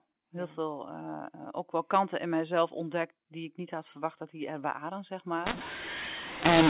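From 5.46 s to the end, the audio shows a mu-law and A-law mix-up. Speech carried as G.711 mu-law at 8 kHz is decoded with the A-law table, so each sample's level is mapped wrongly, some too loud and some too soft. The speech turns harsh and grainy. Unlike plain clipping, the quietest moments are lifted too, so gaps fill with hiss instead of staying silent.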